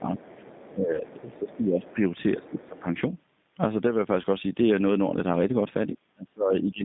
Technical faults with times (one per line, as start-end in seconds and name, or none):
0.00-6.84 G.729 codec
0.00-0.09 speech suppressed in double talk
0.17-0.70 other side's voice leaking through
0.70-2.01 speech suppressed in double talk
0.95-1.03 VoIP packet loss concealed by the speech codec
1.19-1.56 other side's voice leaking through
1.83-1.95 other side's voice leaking through
2.37-2.87 speech suppressed in double talk
2.43-2.80 other side's voice leaking through
4.22-4.26 VoIP packet loss concealed by the speech codec
5.96-6.84 speech suppressed in double talk